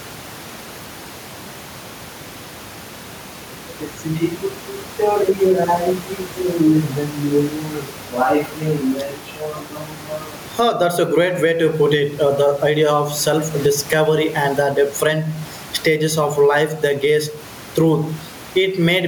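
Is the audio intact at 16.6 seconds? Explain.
No. Gain pumping runs through the whole clip, including 16.6 s. The input gain is likely set too high, with a fast limiter clamping each loud syllable. The room noise, about 31 dB below the speech, is normal, while the gain swings around 15 dB, leaving loud and soft parts closer in level and the sound squashed.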